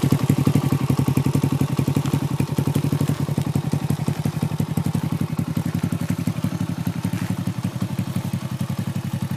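At 3.15 to 3.18 s there are repeated frames: a 26.1 ms stretch, consistent with a single compressed frame, is decoded twice, adding 26.1 ms and producing a brief stutter. On a waveform or spectrogram, that short segment appears twice in succession.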